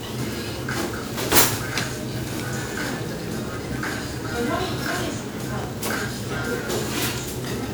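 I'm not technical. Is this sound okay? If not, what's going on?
No, it has generation loss throughout: the sound is swirly, hollow and smeared, with blurry attacks, likely from being saved as MP3 roughly seven times over.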